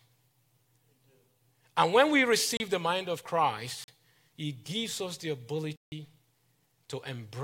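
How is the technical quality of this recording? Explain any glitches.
The recording has three dropouts, each a block of digital silence: the output was filled with zeros, either because the program missed a buffer deadline or because a calculation produced invalid numbers. The speech cuts out abruptly and resumes with no fade, leaving short holes at 2.57 to 2.60 s (31 ms), 3.84 to 3.88 s (40 ms), and a longer 160 ms gap at 5.76 to 5.92 s.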